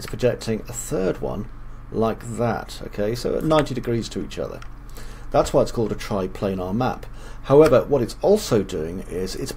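No technical faults can be heard anywhere in this recording.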